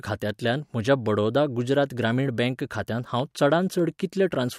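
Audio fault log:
2.70 to 4.50 s, periodic USB or driver dropouts: starting just after "बडौदा गुजरात ग्रामीण बँक", a tick repeats every 0.1 s, around twenty in all, each heard only over the speech. A blocked driver or bus skips a tiny slice of samples, about a tenth of a millisecond, and splices the signal shut with no gap. On a waveform each splice is a small step discontinuity. A spectrogram shows evenly spaced thin vertical broadband lines.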